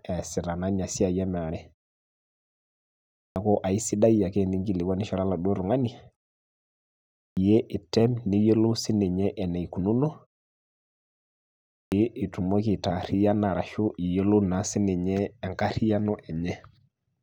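A speech clip with a clipped start after a pause, three times over: at 3.18 s just before "aisiadi ake iningilikuanishore eladuo", at 7.18 s ahead of "item niyiolou", and again at 11.74 s. Each time, after a silence of roughly one to one and a half seconds, the first 180 ms or so is swallowed and the speech jumps in abruptly. That's the output device dozing off in the quiet and needing a moment to wake before it plays.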